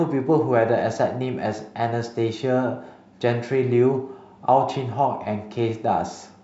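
No technical faults can be heard in the recording.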